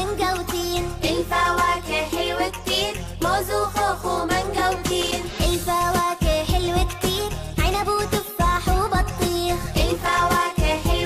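Loose connector crackle at 5.01 to 5.12 s and again at 9.98 to 10.14 s: a worn or dirty contact keeps making and breaking as it shifts, chopping the signal on and off, so each stretch comes through as an irregular burst of scratchy crackle.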